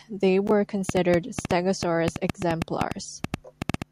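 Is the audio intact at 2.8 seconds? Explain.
No. At 2.8 seconds the speech sits inside a train of clicks running from 0.89 s to the end, about 6.9 per second at an uneven pace, likely from electrical interference or a faulty connection. They pop well above the speech and show as narrow waveform spikes and thin vertical spectrogram lines.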